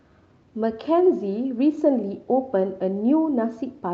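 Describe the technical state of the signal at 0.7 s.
At 0.7 s the speech signal is intact, with no audible dropout, distortion or other technical fault at that moment.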